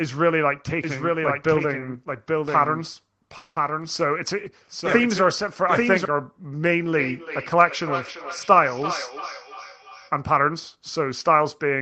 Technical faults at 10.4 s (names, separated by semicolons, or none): jitter buffer speed-up